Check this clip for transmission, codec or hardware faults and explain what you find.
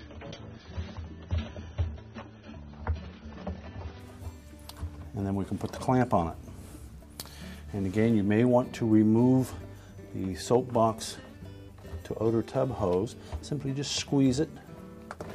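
One fault is present. From 0.0 to 4.0 s the clip shows an adaptive stream starting at a low bitrate: the player began on a reduced-quality version, which fits roughly 24 kbit/s AAC, then switched abruptly, without a gap, to a fuller one, which fits about 96 kbit/s. On a spectrogram, nothing appears above 6.3 kHz until 4.0 s.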